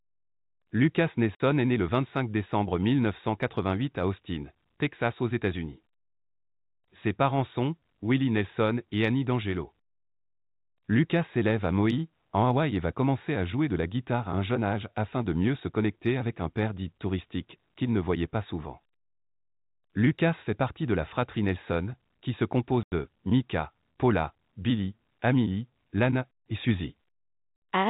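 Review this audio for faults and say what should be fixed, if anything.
The speech drops out twice, at 1.35 to 1.40 s and at 22.83 to 22.92 s, gaps of 50 ms and 90 ms. This is packet loss filled with silence: packets never reached the receiver and it played nothing in their place, so each hole has hard edges. Both lengths are multiples of 10 ms, which points to 10 ms packets. Concealed loss would instead smear or repeat the preceding sound across the gap. The telephone band limit at 4 kHz from G.711 coding is expected. Adding packet loss concealment at the receiver, and forward error correction or a larger jitter buffer, would prevent these audible holes.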